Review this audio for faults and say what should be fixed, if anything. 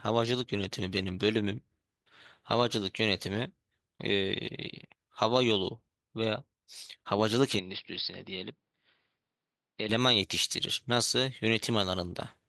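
From 7.59 to 9.89 s the speech dulls, likely an input switched to a poorer device: the spectrogram is empty above 5.3 kHz, and the waveform shrinks without a gap. Lock recording to one microphone and disable automatic device or headset-profile switching.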